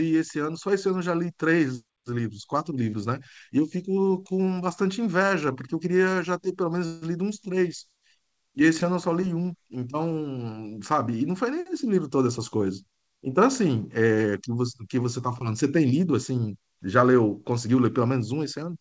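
A call audio freeze at 6.86 to 7.04 s and a jitter buffer speed-up at 11.72 to 13.33 s mark this speech recording, which carries no content above 8 kHz, consistent with a G.722 wideband call path. During the freeze, the last sound is stretched into a brief fading buzz or hiss for about 158 ms before the audio resumes exactly where it left off, likely because delayed packets drained the jitter buffer. That inserts a gap without losing any speech. In the speed-up, the receiver sheds the built-up delay by repeatedly cutting tiny pitch-period slices, roughly 150 ms in total. The speech runs at about 109% speed with unchanged pitch and sounds hurried.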